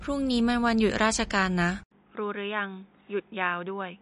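From start to finish the speech sounds watery and swirly, with nothing above 10.6 kHz: plainly audible MP3 compression, likely at a low bitrate around 40 kbps. At 1.83 s an 80 ms silence breaks in, then the sound turns dull and about 10 dB quieter, with nothing above 3.8 kHz and new background noise well below the speech, likely from an input switched to a poorer device.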